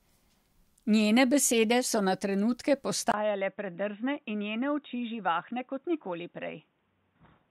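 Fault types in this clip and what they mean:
Input switched to a poorer device: at 3.12 s the speech drops out for 20 ms, then runs dull and boxy to the end, with nothing above 3.8 kHz, a few dB quieter and over a faint new noise floor, likely from a narrower-band microphone or headset call profile.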